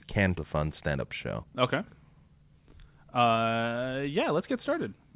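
Speech carried over a narrowband call path, with nothing above 4 kHz, consistent with G.711 mu-law at 64 kbps. At 0.38 to 0.40 s there is a skip ahead: a stretch of roughly a second was dropped while later audio was already queued, so playback jumps forward with no fill and the two sides are butted almost together. The jitter buffer then held more audio than its target and trimmed it by cutting repeated pitch-period slices. This jitter buffer speed-up runs from 0.47 to 1.02 s at 120% speed, removing about a tenth of a second, and again from 1.44 to 2.44 s at 112%, removing roughly 150 ms. The speech sounds rushed while its pitch stays unchanged.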